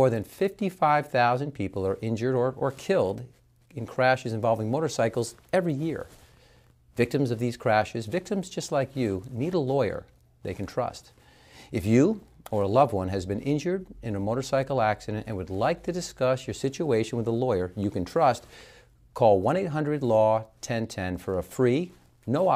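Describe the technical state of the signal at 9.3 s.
At 9.3 s the signal is intact, with no dropout, distortion or other fault to be heard.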